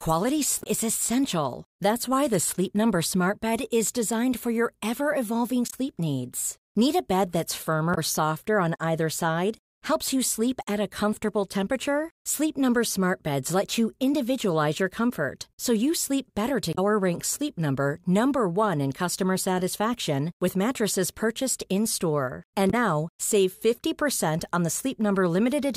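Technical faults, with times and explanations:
0.59–0.66 s, 5.67–5.74 s, 7.91–7.98 s, 16.72–16.79 s and 22.67–22.74 s: damaged data in a compressed stream. Corrupted bytes made the decoder misread frames and lose sync until the next header. Each lasts about 70 ms, the first just before "is essential", another after "so you sleep better".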